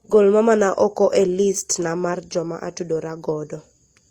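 From 2.09 to 2.15 s, damaged data in the compressed stream leaves the decoder with corrupted frames it cannot read properly, so it loses sync and hunts for the next valid frame header. For those 60 ms the speech breaks up in a brief glitch.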